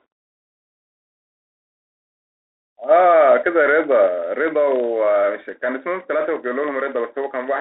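From start to finish the speech carries a steady 25 Hz buzz that rises and falls with its level, the sign of a filter restarted on every block. Each block starts from silence and leaves a small transient, suggesting blocks of about 40 ms.

Throughout, the sound is also confined to a narrow telephone band of roughly 300 Hz to 3.7 kHz, with plainly audible grit, scratchy sibilants and a granular hiss underneath. That points to the Bluetooth CVSD headset codec, whose one-bit, adaptive-step coding fits a 64 kbps link.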